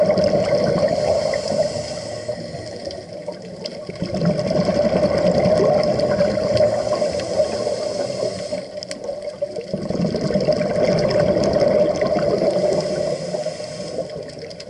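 No technical faults can be heard anywhere in the recording, and the signal holds steady throughout.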